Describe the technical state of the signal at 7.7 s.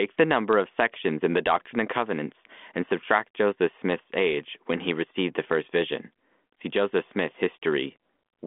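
At 7.7 s the signal is intact, with no fault present; it is simply the band-limited sound of the G.726 ADPCM telephone path at 40 kbit/s, passing roughly 200 Hz to 3.5 kHz with nothing above 3.8 kHz and at most a faint trace of coding noise.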